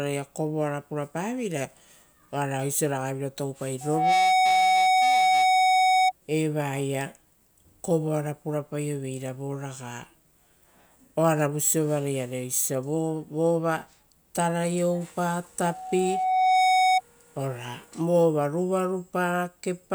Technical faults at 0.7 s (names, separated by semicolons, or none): none